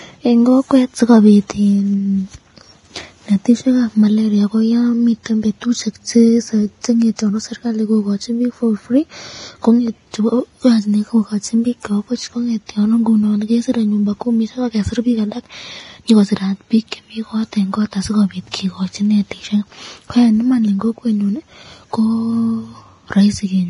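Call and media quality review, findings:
Hissy, grainy treble across the whole clip, nothing above about 10.6 kHz, tones roughened. Likely Vorbis compression at heavy settings, sounds like roughly 30 kbps: treble residue quantised so coarsely it turns into noise, band-limited top.

Pre-echo at 18.51–18.54 s: brief hiss smeared about 22 ms ahead of a sharp onset, attack softened. Transform codec again, with block quantisation noise sized for the loud transient leaking into the quiet bit before it.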